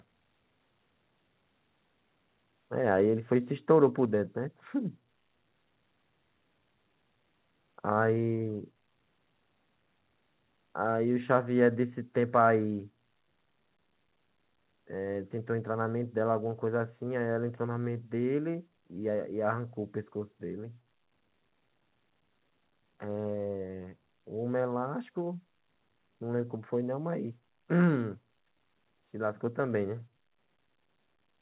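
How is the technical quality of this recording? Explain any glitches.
The speech comes through a narrowband call path with nothing above 4 kHz, consistent with G.711 at 64 kbps. There is one recurring glitch: the microphone volume is stepped down at 4.05, 8.19, 12.12 and 13.14 s. The level drops abruptly by about 2, 1, 1 and 2 dB respectively, with voice and background falling together. This is likely the call software's automatic gain control lowering the device's input volume in single steps after judging the input too hot.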